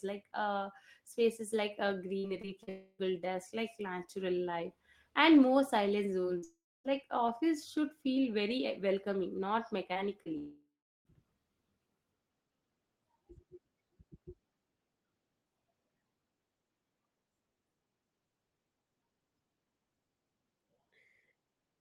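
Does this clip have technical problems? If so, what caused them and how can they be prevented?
Yes. From 2.19 to 2.69 s there is repeated packet loss with a robotic sound. Four holes, about 120 ms in total and the longest 41 ms, were each patched by extending the previous sound. About 23% of that stretch is synthetic, which makes it choppy. Forward error correction and a deeper adaptive jitter buffer would prevent this.

There are three long network dropouts: 2.69–3.01 s (300 ms lost), 6.44–6.86 s (400 ms) and 10.38–11.07 s (680 ms). Each starts as a fading buzz or hiss continuing the last sound, followed by silence of 30 ms, 280 ms and 380 ms. The lost audio never returns. The likely cause is a brief link outage. A stable wired connection or redundant network path would prevent these.

Short concealed packet loss occurs at 6.21 s (about 20 ms) and 6.38–6.44 s (40 ms). The decoder bridged each hole from the preceding sound and blended back, giving a brief smear just before the second dropout. 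Enabling in-band FEC would help recover such single-packet losses.

Scattered short gaps appear between 9.94 and 11.20 s. There are roughly three holes, the longest around 20 ms, about 40 ms altogether, and each is concealed by continuing the last sound. Reducing network jitter and allowing slightly more buffering would prevent these.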